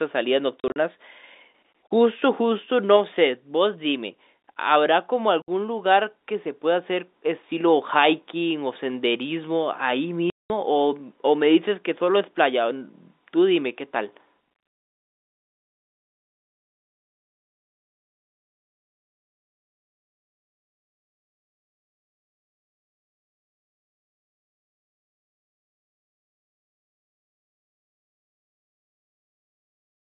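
Packet loss filled with silence chops the speech at 0.6–0.76 s (scattered gaps up to 40 ms), 5.42–5.48 s (60 ms) and 10.3–10.5 s (200 ms). Hole lengths fall in 20 ms steps, which fits 20 ms packets. Each gap has hard edges against the narrowband telephone audio.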